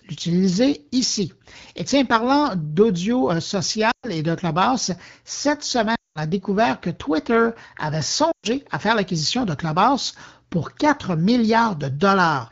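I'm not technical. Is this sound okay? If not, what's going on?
No. The speech has lost AMR speech frames: at 3.91 s after "tiens parlant d'audio euh", 5.95 s before "a découvert que", and 8.31 s before "à faire l'acquisition de", the voice carries on for a split second and then drops to near silence, for a gap of about 0.12 to 0.2 seconds. That brief carry-over before the quiet is the phone guessing the missing sound.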